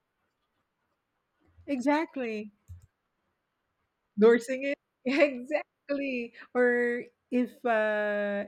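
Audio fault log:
No faults were heard in this speech clip.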